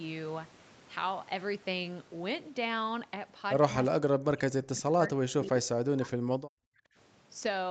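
From 3.92 to 5.55 s, 5.84 to 6.58 s and briefly 6.75 to 6.81 s, the speech drops out, by roughly 40 dB at its deepest. This is speech suppressed in double talk, likely from an echo canceller attenuating the near talker along with the echo.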